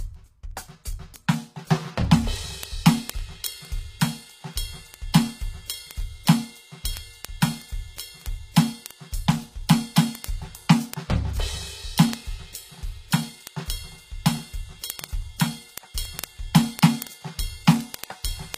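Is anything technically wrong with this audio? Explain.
Yes, two faults are audible in this music.

HE-AAC compression runs throughout: nothing is present above 15.5 kHz, and the treble sounds rebuilt rather than captured. The codec likely copied lower bands upward to fill it, so cymbal and sibilant detail turns gritty and metallic, as expected at a bitrate around 24 kbps.

Word clock ticks run from 0.15 s to 18.54 s. The receiving device's clock is not locked to the sender's, drifting by roughly 500 ppm, so a single sample is dropped or repeated about every 0.05 s. That produces hundreds of sharp ticks of uneven strength, repeating steadily.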